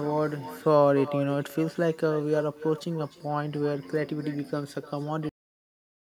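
A speech recording carries an echo with no canceller from start to finish. Every phrase returns roughly a third of a second later, about 15 dB down and thinner, because a far-end loudspeaker feeds a microphone and nothing subtracts it. Room reverberation smears continuously, whereas this is a distinct delayed copy. There is also a cut-off end at 5.29 s. The sound stops mid-utterance and drops straight to digital silence with no decay, because the final buffers were never written. Unlike a fade-out or a brief dropout, nothing resumes afterwards.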